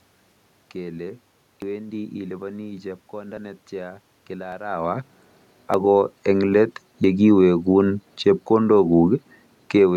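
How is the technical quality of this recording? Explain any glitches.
The recording has five short glitches from dropped buffers (overruns), at 1.62, 3.37, 4.52, 5.74 and 7.04 s. Room noise and a level change near 4.5 s, as the talker shifts position, belong to the recording itself.

At each point the speech jumps ahead. The likely cause is the program not collecting samples before the hardware overwrote them, so a few tens of milliseconds vanish with no gap. The waveform shows an abrupt discontinuity, and the spectrogram shows a thin vertical broadband line.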